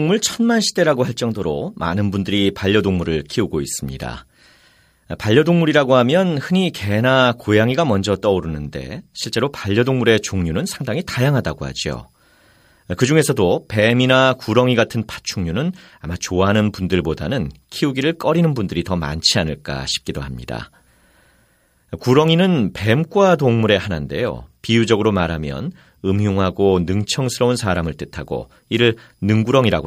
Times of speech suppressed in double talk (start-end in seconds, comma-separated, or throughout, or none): none